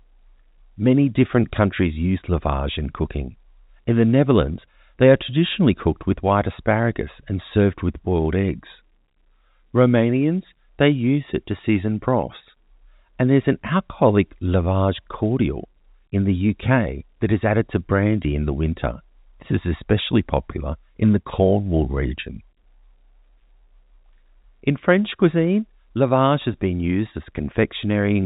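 Nothing here counts as a fault; the speech simply has the narrow, telephone-like sound you'd expect from a G.711 A-law line at 64 kbps, with everything above 4 kHz gone as that format intends.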